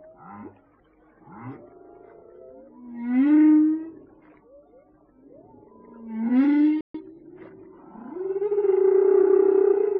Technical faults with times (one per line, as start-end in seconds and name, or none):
6.81-6.95 playback stall
6.95-7.07 time-compressed catch-up